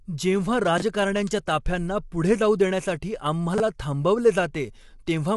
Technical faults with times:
0.00-5.36 low-delay AAC compression
0.78-0.82 chunks out of order
3.54-3.60 chunks out of order

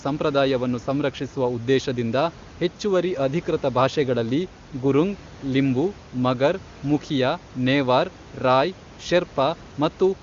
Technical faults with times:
none

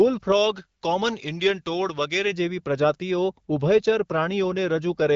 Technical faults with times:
0.32-2.32 pre-emphasis left on

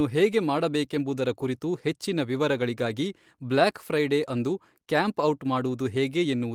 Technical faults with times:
0.00-6.54 clock drift between sender and receiver
0.29-6.42 repeated timing corrections

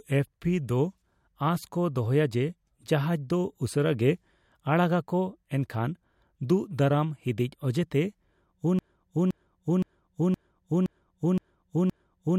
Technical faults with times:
8.79-12.39 broken-record loop

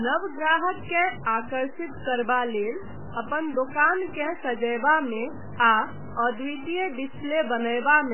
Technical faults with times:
0.00-8.13 low bit depth without dither
0.00-8.13 MP3 compression

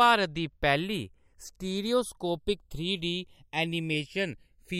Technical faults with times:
0.00-4.80 channels drifting apart

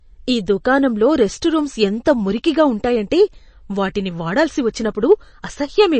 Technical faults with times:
0.00-6.00 MP3 compression

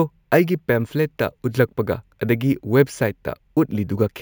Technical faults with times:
0.00-4.21 imaging from sample-and-hold upsampling

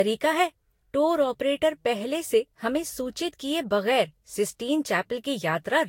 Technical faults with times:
0.00-5.88 generation loss

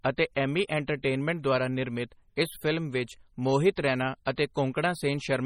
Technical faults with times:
0.00-5.45 MP3 compression

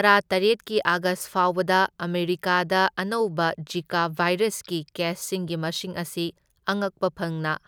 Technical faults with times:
none

